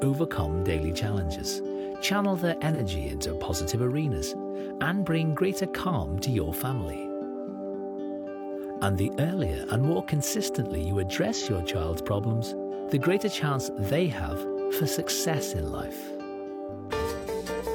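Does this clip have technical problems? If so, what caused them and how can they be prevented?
Yes. AAC frame loss with concealment produces brief smeared, noisy patches at 2.74–2.81 s and 11.34–11.47 s, each consistent with one lost frame of about 43 ms that the decoder rebuilt from the preceding spectrum. Forward error correction or retransmission on the transport would prevent this.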